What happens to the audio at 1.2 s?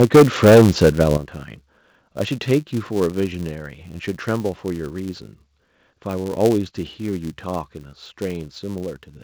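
At 1.17 s the level of the speech and the background drops suddenly by about 9 dB in a single step. This is a microphone volume step-down, likely the call software lowering the device's input gain after judging the input too hot.

Through this moment, as across the whole clip, a filter restarted on every block adds a buzz at 200 Hz. Each block starts from a cleared filter state, leaving a small transient whose strength follows the signal level, so the buzz also dips at the step.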